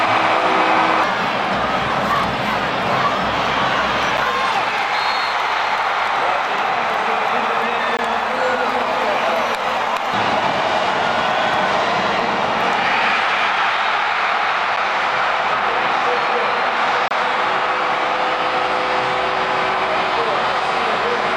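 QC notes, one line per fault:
4.17 s, 7.97 s, 14.76 s and 17.08–17.11 s: gap at a join of encoded pieces. Continuous sound drops out briefly, for about 6.7, 18.4, 8.4 and 28.2 ms, then resumes where it stopped. Each piece was encoded separately and joined untrimmed, so the encoder's start-up delay and the padded last frame remain as silence at each join. On a spectrogram each gap is a thin, blank vertical strip across all frequencies. On the waveform it is a short flat line with edges smeared by the codec.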